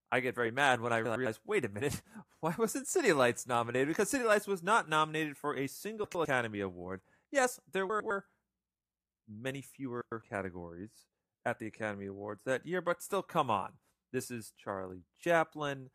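This speech clip has frames out of order at four points. Two neighbouring blocks of about 104.5 ms, each consistent with four frames, were decoded swapped, so a 0.21 s stretch plays with its halves exchanged. This produces a garbled flutter, but no time is lost. The swaps fall at 1.05 s (after "very mad when I", before "wait a minute"), 6.04 s (after "not nominated for a"), 7.90 s and 10.01 s (before "categories at the").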